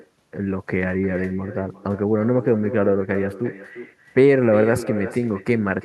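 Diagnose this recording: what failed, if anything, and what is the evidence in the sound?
Call processing failed: echo with no canceller. Throughout, each phrase returns roughly 400 ms later, about 13 dB quieter and thinner, a distinct delayed copy rather than a room's smooth reverberant tail.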